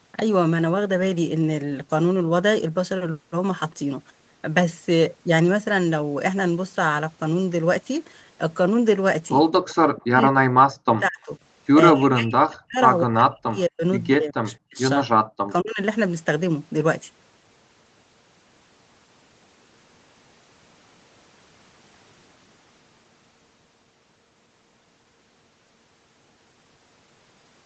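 Speech suppressed in double talk at 9.95–11.32, 11.92–12.81, 13.02–13.84, 14.15–14.78 and 15.32–15.79 s: the speech sinks by up to about 40 dB in pieces, likely because the echo canceller mistook overlapping talk for loudspeaker echo.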